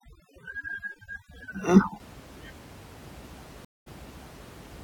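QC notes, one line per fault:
0.0–2.0 s, overdone noise removal: the room noise, sitting about 18 dB below the speech, is suppressed so hard that the background drops and breaks up into twinkling specks. Bands close to the noise estimate are cut along with quieter speech detail.
3.65–4.49 s, stream reconnect: the connection drops, leaving a 214 ms gap. Playback then resumes 627 ms earlier than where it broke off, so a stretch of audio is heard twice as the server resends a burst. A fresh decoder starts mid-stream, with its first frame fading in.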